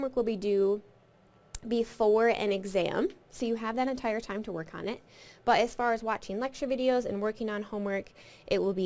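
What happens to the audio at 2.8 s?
Nothing goes wrong at 2.8 s; the audio there plays through intact, with no dropout, click or distortion to be heard.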